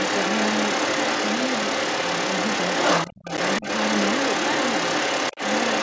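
Other side's voice leaking through runs from 0 to 5.83 s. A second voice sits under the speech at about the same level, even slightly louder, likely because the echo canceller left part of the loudspeaker playback in the microphone signal.

Speech suppressed in double talk occurs from 3.07 to 3.26 s. The main voice sinks sharply, by several tens of decibels at its deepest, for about a fifth of a second. The likely cause is the canceller mistaking overlapping talk for echo and attenuating everything.

Packet loss on an ADPCM call appears at 3.37 s and again from 5.34 to 5.41 s. Hard-edged gaps of 10 ms and then 30 ms open, the second fitting about three lost packets. Afterwards the decoder's predictor and step size lag the sender's, so speech resumes with brief distortion.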